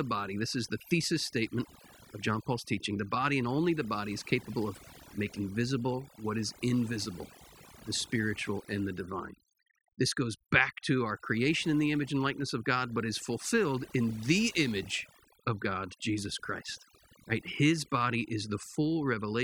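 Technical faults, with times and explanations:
Throughout, overdone noise removal: the noise reduction is too aggressive, gating background bands to near-silence with twinkling specks and taking quiet parts of the speech with them.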